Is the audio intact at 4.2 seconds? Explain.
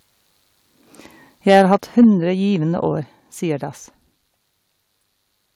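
Yes, the audio is intact at 4.2 seconds, with no fault audible at that moment.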